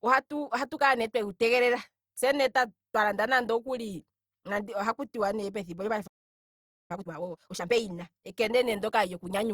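At 6.07 s the speech cuts out in mid-flow and the output stays completely silent until 6.91 s, a gap of about 0.83 s. This is a playback stall. The likely cause is that the player's buffer ran dry or its audio thread was held up, so nothing reached the output until data flowed again.

From 6.91 s to 7.73 s the speech that follows comes out rushed, at roughly twice its normal rate, yet the pitch stays where it was. This is time-compressed catch-up. Having fallen behind during the stall, the player works through its backlog by removing short slices of audio and cross-fading across the joins. The doubled rate over those 0.82 s shrinks the delay.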